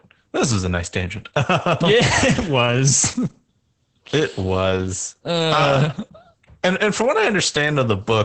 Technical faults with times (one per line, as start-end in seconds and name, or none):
0.00-8.24 Opus voice compression